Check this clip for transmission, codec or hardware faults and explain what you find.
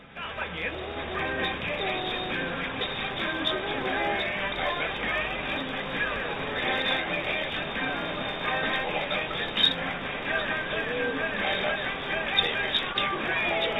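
Two faults turn up: a block-size mismatch running through the whole clip, and one brief concealed packet loss near the end.

Block size mismatch (truncated), present throughout: one processing stage hands on longer blocks than the following stage reads, so the tail of every block is dropped. Each cut leaves a small discontinuity, and these repeat at about 46.9 Hz, heard as a low, steady buzz under all the audio. The pattern fits 1024-sample blocks. The speed ratio here is 1.0, so the timing of the audio does not audibly shift.

Short concealed packet loss, from 12.93 to 12.96 s: about 20 ms of audio failed to reach the decoder in time. The receiver covered roughly 14 ms of the gap by extending the preceding sound and then blended back into the real signal. The result is a momentary smear or slight wobble, a tiny glitch rather than a clean dropout. The call codec, G.711 mu-law, carries nothing above 4 kHz, so the whole clip sounds band-limited.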